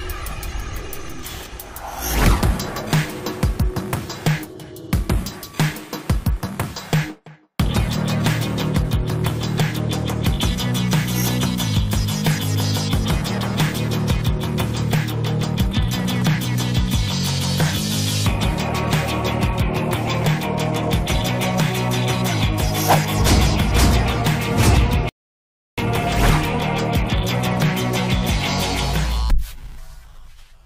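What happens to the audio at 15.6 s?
Nothing goes wrong at 15.6 s; the audio plays through that moment intact, with no dropout, click, distortion or other fault.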